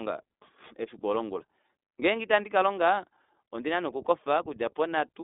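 Throughout the speech, the iLBC codec reduces it to a narrowband channel, coding each short frame independently in a way that suggests its 20 ms, 15.2 kbps mode. Only about 250 Hz to 3.7 kHz survives, nothing above 3.8 kHz, leaving a muffled, plainly rough, synthetic edge.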